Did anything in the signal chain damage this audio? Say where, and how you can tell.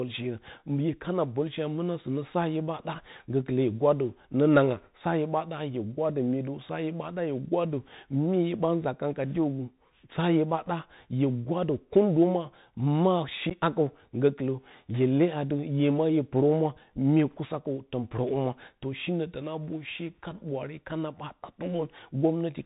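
Yes, at two stages. The Bluetooth CVSD headset codec marks the whole clip. The speech is band-limited with nothing above 4 kHz, s sounds come out scratchy, and a granular hiss sits under the voice throughout. CVSD sends a single up-or-down bit per sample, which fits a 64 kbps link, and its adaptive step can't keep pace with loud high-frequency energy. It falls behind and distorts instead, so the codec damage is plainly audible.

Unconcealed Bluetooth headset packet loss occurs at 13.50 to 13.52 s. About 11.2 ms of speech drops out abruptly, with hard edges rather than a fade, and the voice returns briefly quieter, as a CVSD link does after a dropout. That points to a few voice packets lost over the radio link between headset and phone. Nothing on the receiving side filled the gap, so silence or an idle pattern played in their place.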